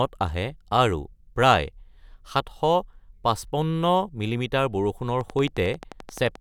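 A speech clip with a train of clicks from 5.21 to 6.36 s: about fifteen regular ticks at 11.4 per second, peaking roughly 5 dB above the voice. On a spectrogram or waveform they appear as evenly spaced thin vertical spikes, likely from electrical interference or a faulty connection or power supply.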